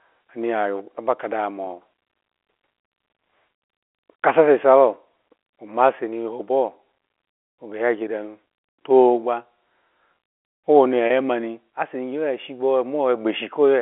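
Packet loss with pitch repetition hits this speech recording at 1.65–1.67 s and 11.07–11.10 s, where gaps of about 20 ms and 30 ms are bridged by repeating the last pitch period, giving brief buzzy holds. The band-limited telephone tone comes from G.711 coding.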